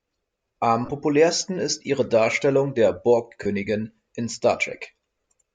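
Speech with lost LE Audio frames at 0.85 to 0.89 s, 3.43 to 3.46 s and 5.23 s. Each gap lasts 22.5 to 37.5 ms, fitting a few 7.5 ms frames. The decoder repeats the last spectrum with scrambled phase, so the sound smears into brief noise.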